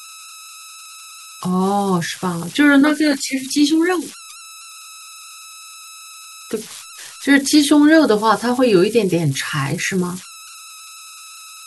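Right through the speech there are converter idle tones: a whistle around 1.5 kHz in the pauses and a grainy hiss under the speech, sitting about 20 dB below the signal. An undithered delta-sigma converter has settled into repeating bit patterns on small inputs.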